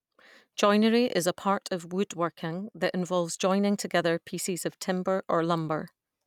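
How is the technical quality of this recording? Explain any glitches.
Listening closely, nothing in the recording stood out as a technical problem.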